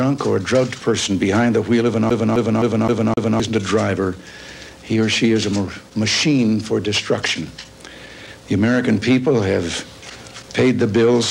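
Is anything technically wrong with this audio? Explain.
Yes. From 2.10 to 3.40 s the CD is stuck on one turn: the laser jumps back each rotation, replaying one 0.26 s slice five times, with a brief mute at each jump. That mute separates it from a seamless digital loop.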